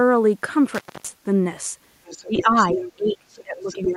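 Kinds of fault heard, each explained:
Intermittent contact: at 0.75 s the speech drops out for about 260 ms, crackle on both edges, as if a loose plug or cable briefly opened. What's left in the gap is just faint line noise until the signal snaps back around 1.08 s.
Other side's voice leaking through: a second voice comes in under the speech from 2.05 to 2.91 s at roughly 10 dB down, again as a short, very faint scrap near 3.4 s, and at nearly full level from 3.68 to 3.93 s. The likely cause is a loudspeaker echo the canceller didn't fully remove.
Speech suppressed in double talk: from 2.24 s to the end, while that other voice is present, the main speech keeps dipping, about 20 dB at worst, across roughly a second and a half. That's likely the echo canceller clamping down on everything when both sides overlap.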